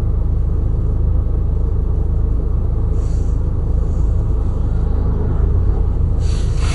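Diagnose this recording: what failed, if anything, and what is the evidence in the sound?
Codec stage. Throughout, nothing sounds above 11.2 kHz, with gurgling, granular distortion. Likely MP2 compression, its sub-bands starved of bits, which fits a rate near 56 kbps.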